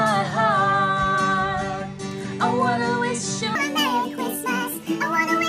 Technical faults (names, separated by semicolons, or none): wrong sample rate